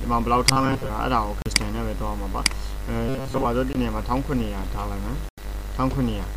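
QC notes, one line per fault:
0.49–0.89 s and 3.09–3.45 s, robotic sound from repeated short buffers: new audio is arriving too slowly, and the playback side likely covers each gap by looping the last fragment it holds, which fits a loop of about 7.5 ms. Most of the real audio in these spans is skipped. The constant repetition stamps a fixed 134 Hz pitch onto the sound, so it becomes a stiff, metallic buzz that only loosely tracks the underlying contour.
1.42–1.48 s, 3.73–3.76 s and 5.29–5.43 s, Bluetooth stall: packets to the headphones are held up, likely by radio interference, so the headphone buffer empties and playback halts until the resent data arrives. Each stall is heard as an abrupt dropout to silence, lasting 39 ms, 20 ms and 89 ms respectively, after which the sound resumes rather than fading back in.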